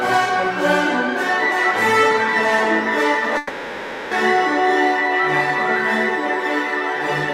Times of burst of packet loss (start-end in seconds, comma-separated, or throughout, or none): none